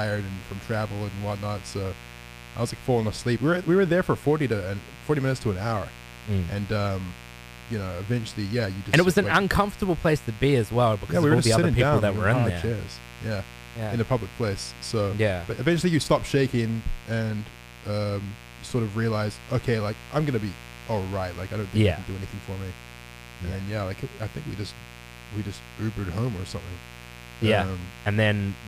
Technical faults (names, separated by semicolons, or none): mains buzz